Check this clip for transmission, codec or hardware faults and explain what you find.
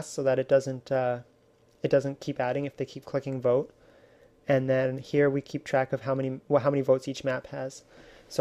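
Nothing stood out on listening to this clip.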